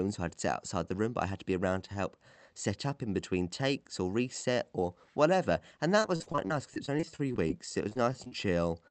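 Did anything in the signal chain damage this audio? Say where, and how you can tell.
Yes, and it's all in the network stage, late in the clip. From about 6.02 to 8.33 s you get repeated packet loss, which gives that robotic sound. There are around twenty short holes, the longest about 43 ms, and roughly a fifth of that stretch is concealed. The receiver keeps stretching the last bit of sound to bridge each gap, the next gap arrives almost immediately, and the speech comes out choppy and mechanical with pieces missing.

Overlapping the tail of that, from about 7.98 to 8.52 s, there's a jitter buffer slow-down. The speech drags to about 92% speed while the pitch stays put, and about 49 ms is added over that half second. The receiver was rebuilding its reserve by repeating pitch periods, so sounds get drawn out.

Right at the very end, 8.88 to 8.90 s, there's one more short concealed packet loss. 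About 20 ms never arrived in time and the decoder filled it by extending the preceding sound. What you hear is a quick smear or wobble as the clip closes. It's the same network trouble, just a single small hole instead of a run of them. The Opus call path itself is working as expected, with audio band-limited to about 8 kHz.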